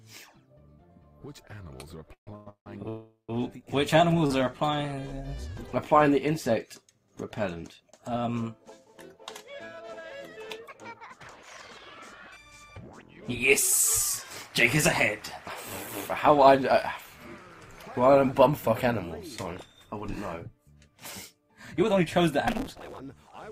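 From 2.06 to 4.31 s the audio stalls again and again. These are repeated stalls, a stutter. There are five gaps. Together they fill about 453 ms, about a fifth of that span. The longest lasts 166 ms. Each time, the last sound is drawn on until playback resumes. Nothing is lost, but the flow drags and jerks. Packets kept arriving late, so the jitter buffer kept running dry.

Inside that stretch, from 2.89 to 3.30 s, comes the longest hold. This is a call audio freeze. The last sound carries on as a fading buzz or hiss for 396 ms. About 120 ms of that is silence. Then the audio resumes where it stopped, and nothing is missing. The whole playout now runs 396 ms later. The likely cause is packets held up in transit, which emptied the buffer.

From 4.38 to 5.09 s the audio runs slower at an unchanged pitch. This is a jitter buffer slow-down. Playback runs at 87% speed. About 99 ms is added. 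Sounds are drawn out. The receiver is repeating single pitch periods and bits of pause. It is rebuilding its reserve.

Three stretches then run faster at the same pitch. Each is a jitter buffer speed-up. From 7.55 to 8.10 s the speed is 106%. From 16.30 to 16.73 s it is 109%. Each of these drops about 50 ms. From 20.46 to 23.50 s the speed is 110%, and roughly 400 ms goes. The audio sounds hurried. The buffer held more than its target. It trimmed short runs of pitch periods to cut the delay.

From 22.47 to 23.00 s, during the last speed-up, a buzz appears at 188 Hz. This is a block size mismatch, truncated. The audio races at 1.88 times normal speed with pitch roughly unchanged. One stage writes longer blocks than the next reads. The tail of each block is discarded. The buzz rate points to reads of 256 samples.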